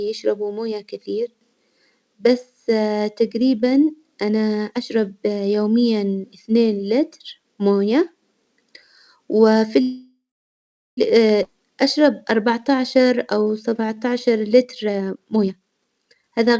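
At 9.82 s the speech stops and the last sound is held as a fading buzz or hiss that drops to silence for about 0.77 s, the whole hold lasting until 10.99 s. This is a call audio freeze, likely from delayed packets draining the jitter buffer. Playback then resumes where it halted, adding 1.15 s of delay with nothing lost.

From 11.43 to 11.46 s comes a skip ahead: roughly 0.7 s of speech is dropped and the two sides are butted together with only a tiny joining gap. The jump takes about 0.7 s off the delay.

Between 11.53 and 14.63 s a jitter buffer slow-down follows. The speech plays at 92 % speed with unchanged pitch, and sounds are drawn out, because single pitch periods were repeated to add 258 ms of reserve.

From 14.68 to 16.54 s a jitter buffer speed-up takes over. Short pitch-period pieces are cut out repeatedly, totalling about half a second, so the speech runs at 127 % speed at the same pitch and sounds hurried as the buffer sheds excess delay. 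Throughout, the call path passes nothing above 8 kHz.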